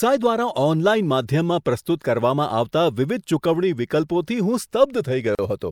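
Near the end, at 5.35 s, the speech drops into a gap at a join of encoded pieces, about 38 ms of silence from unremoved encoder delay and padding, then resumes right where it stopped.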